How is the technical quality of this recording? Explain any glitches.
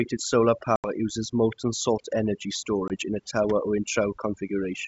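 The recording has two problems: heavy-handed noise removal throughout, and two short dropouts from lost packets.

Overdone noise removal runs through the whole speech clip. The suppressor cuts narrow frequency bands whenever they sit near its noise estimate. Quiet parts of the voice vanish with them. The background drops and breaks up into twinkling specks.

Packet loss on an ADPCM call causes the dropouts. The first runs from 0.76 to 0.91 s, just before "uses molten salt energy", with about 80 ms missing, roughly four packets. The second, from 2.88 to 2.96 s, comes after "uses molten salt energy" and before "in a tower or", with 20 ms missing, about one packet. Each gap is a hard-edged silence. The decoder's predictor and step size lose sync with the sender, so speech returns slightly distorted before settling. The wideband G.722 coding carries all this up to about 7 kHz.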